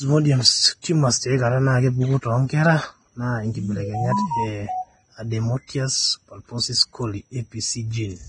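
Vorbis compression runs throughout, with nothing above 9.7 kHz and grainy, hissy treble, likely from a low-rate Vorbis encode of roughly 22 kbps coarsely quantising the residue. Pre-echo spans 0.82 to 0.84 s, a 21 ms hiss smeared ahead of the sharp onset of "tumors tiaikata", as block-wide quantisation noise fills the quiet gap.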